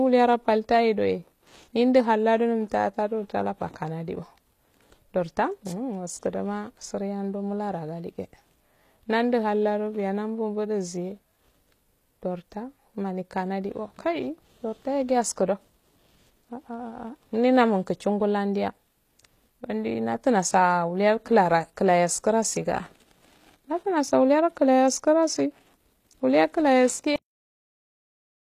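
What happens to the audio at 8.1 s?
At 8.1 s the speech carries the same plainly audible codec damage heard across the whole clip, likely HE-AAC compression at a rate that fits roughly 24 kbps. The treble is rebuilt by copying lower bands upward under a coarse envelope, so s sounds come out gritty, metallic or lispy, and nothing reaches above 14.9 kHz. A plain low-pass would simply leave the top dull. Here the upper band is present but synthetic, with harmonics that fail to line up across the crossover.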